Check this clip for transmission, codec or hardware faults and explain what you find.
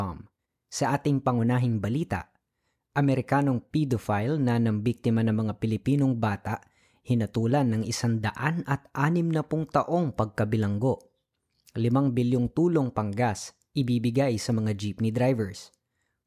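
No transmission, codec or hardware faults.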